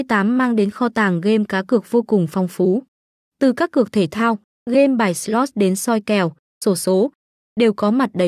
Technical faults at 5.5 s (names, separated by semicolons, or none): none